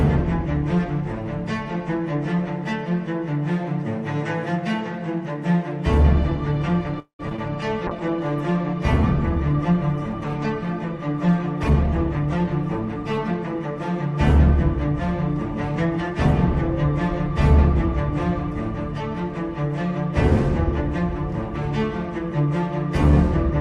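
At 6.99 s the packet stream likely stalled and the jitter buffer ran dry, causing a call audio freeze until 7.21 s. The receiver stretched the last sound into a fading buzz for about 0.2 s, roughly 0.11 s of it near-silent. The audio then resumed where it had stopped, with nothing lost but a gap inserted.

Right after, two short concealed packet losses follow as audio fails to reach the decoder in time. The first, at 7.29–7.32 s, hides about 20 ms of missing audio. The second, at 7.36–7.40 s, hides about 40 ms and trims the delay by around 30 ms. Each is bridged by extrapolating the preceding sound and then blending back, so both come across as brief smears or wobbles.

From 7.56 to 8.31 s the jitter buffer slow-down builds back a reserve by repeating single pitch periods. This adds 44 ms and plays the audio at 95% speed with its pitch unchanged, so the sound is slightly drawn out.

A call bitrate drop runs from 7.89 to 14.43 s. 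The bandwidth estimate fell and the encoder went from 64 to 21 kbps, staying at the lowest rate for about 5.4 s. Its audio bandwidth shrank from 20 kHz to 12 kHz, so the sound is coarser, watery and duller on top.

Within that stretch, two jitter buffer speed-ups drain excess delay by cutting out pitch periods, each removing roughly 0.1 s. At 11.63–11.75 s the audio rushes abruptly at 176% speed. At 12.89–14.07 s it hurries more gently at 108%, with the pitch held steady both times.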